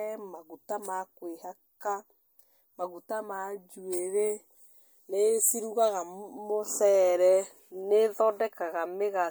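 No technical faults are audible anywhere in the speech recording.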